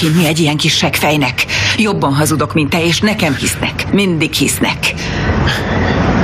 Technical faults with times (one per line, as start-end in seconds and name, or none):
0.00-6.23 gain pumping